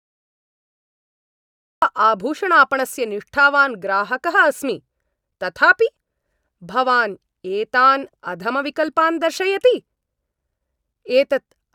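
The speech in this clip opens on about 1.8 s of dead digital silence, and at 1.82 s the audio jumps straight in partway through a sound, with no natural attack or fade-in leading up to it. This is a cut-off start: capture or streaming began late, so the beginning of that utterance was never recorded, and the waveform is switched on abruptly from zero rather than rising as the sound itself would.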